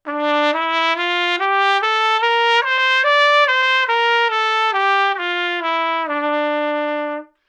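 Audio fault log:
No technical faults can be heard anywhere in these everyday sounds; the signal holds steady and continuous throughout.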